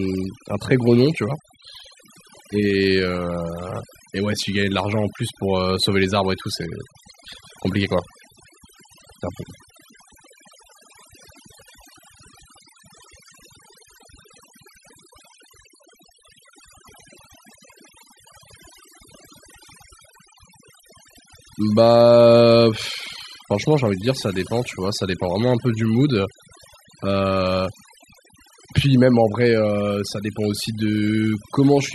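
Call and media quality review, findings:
Overdone noise removal, throughout: near-silent background with twinkling specks. Spectrogram shows bands gated off between syllables, isolated bright dots. Likely over-aggressive denoiser.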